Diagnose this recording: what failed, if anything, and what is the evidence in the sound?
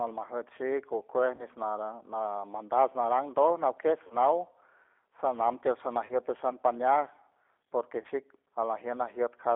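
The codec stage has degraded the speech: it went through G.729 at 8 kbit/s, which sounds plainly rough and synthetic. Coding from a vocal-tract filter, pitch predictor and sparse pulses leaves a spectrogram band of about 300 Hz to 3.6 kHz, empty above.

On the network, VoIP packet loss concealed by the speech codec appears at 1.36–1.44 s after "shik okuej", 4.07–4.16 s, 6.06–6.16 s after "sanam tiel", and 8.01–8.07 s. Each lost 30 ms packet is bridged by extrapolating the last pitch and filter into a fading buzz or coloured noise. The waveform shows repeated, shrinking cycles, and the spectrogram shows frozen, smeared harmonics.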